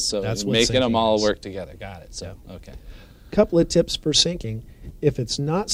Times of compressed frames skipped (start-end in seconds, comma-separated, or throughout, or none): none